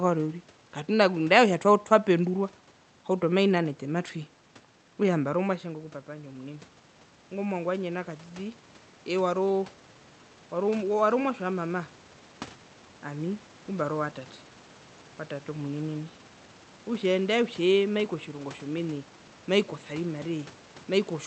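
At 5.44 s the automatic gain rising begins, once the talker moves away from the microphone around 5.0 s and the input level falls by about 11 dB. The gain control reacts slowly, lifting its gain by about 8 dB until 14.1 s, so the speech and the room noise swell together. On the waveform the envelope shrinks suddenly, then widens steadily; on a spectrogram the background floor brightens alongside the voice, all beneath the call path's 8 kHz ceiling.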